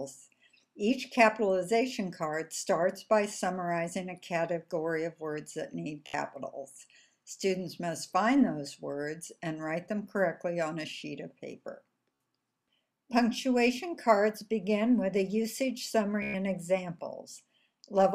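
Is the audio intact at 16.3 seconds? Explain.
No. A Bluetooth stutter runs from 16.23 to 16.34 s: about 116 ms of data went missing, and the receiver kept replaying its last buffer, giving a buzzy repeat. The waveform shows one short slice tiled over and over, and the spectrogram shows identical vertical stripes.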